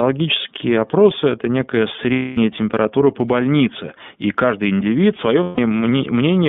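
The whole clip has passed through the iLBC codec, which keeps only about 150 Hz to 3.6 kHz and codes each frame independently, with a grain that points to the 30 ms, 13.33 kbps mode. The speech sounds plainly rough, boxy and slightly synthetic. Lost iLBC frames come next. From 2.13 to 2.38 s, after "это некая", about 240 ms of packets went missing and the decoder filled the gap by repeating the last pitch cycle with noise, heard as a held, buzzy vowel before "температура по больнице и" returns cleanly. The same happens for 150 ms from 5.43 to 5.59 s, just after "и каждый индивид свое".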